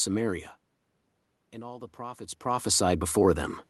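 A speech recording in which automatic gain rising sets in from 1.51 s to 3.64 s. The level reaching the microphone drops by about 14 dB, and the gain control climbs by about 8 dB over roughly two seconds to compensate. Voice and room noise swell together across that span, so the background audibly lifts along with the speech. The talker's own movements near 0.5 s and 2 s add the level shifts expected from a change of distance.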